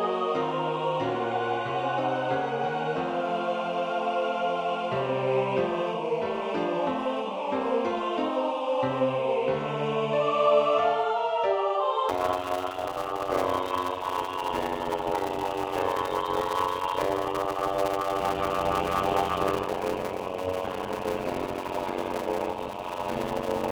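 From 12.09 s to the end, a block size mismatch (padded) pads short blocks with silence, fitting 256-sample writes, causing a 91.9 Hz buzz and playback slowed to 0.533 speed at near-normal pitch.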